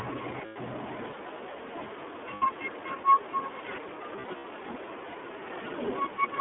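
The speech runs through the iLBC codec for its whole length. The line band is about 250 Hz to 3.5 kHz, and the sound fits iLBC's 15.2 kbps mode with 20 ms frames. Coding each frame's excitation on its own leaves the voice thin and plainly rough and synthetic.

Lost iLBC frames come next, at 0.46–0.57 s (100 ms) and 2.34–2.43 s (80 ms). The decoder fills each gap by repeating the last pitch cycle blended with noise, so the sound becomes a held, buzzy vowel and then snaps back clean. At 4.16–4.45 s, 140 ms of losses are spread across about 280 ms in short bursts, the longest well under a tenth of a second, which gives a stuttering run of brief buzzy holds.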